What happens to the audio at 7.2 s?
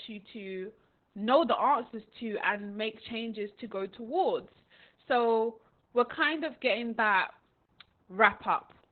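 At 7.2 s the speech is still under the Opus voice compression that runs through the whole clip. The codec is working in its SILK linear-prediction mode at narrowband, so nothing above roughly 4 kHz survives, and heavy damage points to a very low bitrate near 8 kbps. The voice sounds muffled, hoarse and slightly robotic. A plain low-pass filter would only dull the sound. This coarse excitation coding also roughens and buzzes the voice.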